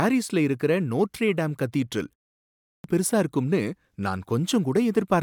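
Speech with a clipped start after a pause at 2.46–2.84 s: after a 0.39 s silence following "இருக்கற நோட்ரே டேம் கதீட்ரல்", the output device wakes late, swallowing about 0.38 s before "பெருசா இருக்கும்னு" enters abruptly.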